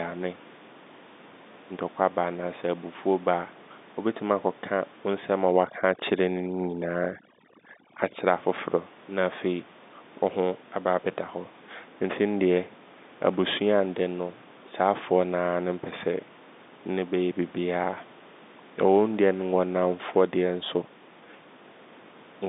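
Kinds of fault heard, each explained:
Overdone noise removal: from 5.51 to 8.26 s a noise reducer clamps down far too hard, cutting individual frequency bands whenever they come close to what it has taken for noise. The room noise, about 23 dB under the speech, drops and breaks up into little twinkling specks. The quieter parts of the speech get pulled down along with it for that stretch.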